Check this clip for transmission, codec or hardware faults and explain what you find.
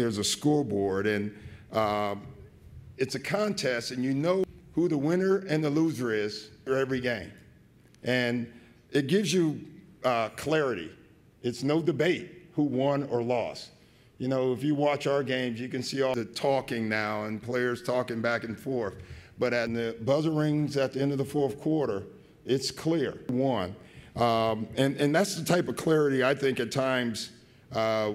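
The audio contains damaged data in a compressed stream, heard five times. Brief glitches occur at 4.44, 6.67, 16.14, 19.67 and 23.29 s. Each is a short chirp or blip that breaks the flow of the sound for an instant. At those points part of the compressed data was wrong. The decoder could not read the affected frames correctly, lost its place, and had to search for the next valid frame header before it could resume decoding.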